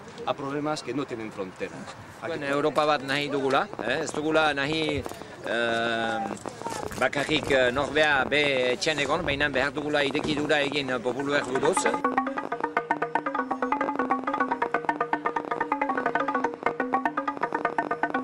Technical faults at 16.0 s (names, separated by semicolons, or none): train of clicks